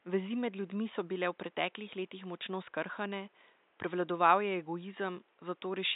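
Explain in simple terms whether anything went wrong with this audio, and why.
Nothing went wrong with this speech audio; the faint room noise in the background is simply part of the space where it was recorded.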